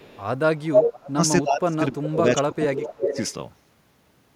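Echo leak appears from 0.00 to 0.24 s and again from 0.57 to 0.90 s: a delayed copy of the speech arrives 288 ms and then 290 ms late, first faint at about 30 dB under the speech, then slightly louder than the speech itself. The likely cause is a far-end loudspeaker whose echo canceller let its microphone pick-up through and sent it back.

Speech suppressed in double talk follows from 0.67 to 1.19 s, dipping by as much as about 35 dB, then from 1.42 to 3.19 s, dipping by about 25 dB. The speech sinks, most likely because the echo canceller, facing both sides at once, turned down the talker along with the echo.

Echo leak returns at 2.52 to 2.63 s, about 20 dB below the speech with a 296 ms delay, and at 2.82 to 3.33 s, only about 5 dB below with a 298 ms delay. These overlap the suppressed stretch, so a late repeat of the speech sounds against the weakened speech.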